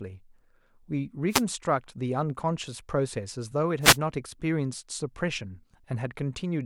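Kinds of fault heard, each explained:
Wireless microphone noise hit: The analogue radio link fades, letting receiver noise through. Two brief static swishes are heard, at 1.29–1.43 s and 3.81–3.98 s.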